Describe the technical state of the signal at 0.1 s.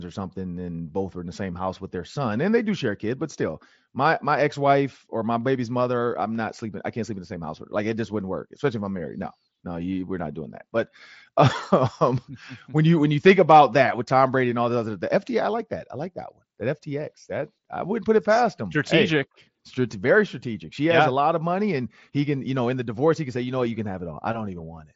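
At 0.1 s the signal is intact, carried through the Bluetooth mSBC headset codec as normal, with the speech band reaching up to about 7.7 kHz.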